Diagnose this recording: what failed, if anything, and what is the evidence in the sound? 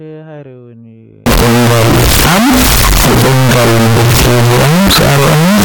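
Signed and unsigned mixed up from 1.26 s to the end: harsh, full-loudness distortion in quiet gaps too, likely a sample-format conversion flipping the top bit of 16-bit samples.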